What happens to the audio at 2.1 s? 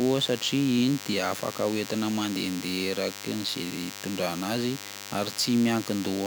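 A nearby DECT cordless phone's radio bursts, rectified by the audio circuit, produce a thin, steady 100 Hz buzz with many harmonics under the speech, about 15 dB below it, across the entire clip including 2.1 s.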